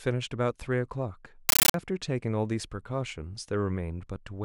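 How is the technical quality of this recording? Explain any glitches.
The recording has one serious glitch: from 1.49 to 1.74 s the speech is replaced by a compressed stream played as audio. The undecoded bitstream is taken as raw samples, so each 13.3 ms frame of data comes out as a burst of noise followed by silent padding, 31.25 times a second. The result is very loud, chattering static. That steady 31-per-second gating distinguishes it from random digital noise or clipping, and the pattern points to an AC-3 stream, which fits 640 kbps.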